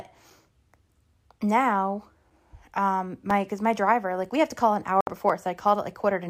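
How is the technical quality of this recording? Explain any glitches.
The speech carries one audible glitch near the end.

A digital broadcast dropout runs from 5.01 to 5.08 s. The receiver lost the digital signal or rejected corrupted frames and muted until clean ones arrived, punching a brief hole of about 64 ms, which fits two lost frames. The speech drops to silence, and what fell in that gap is gone.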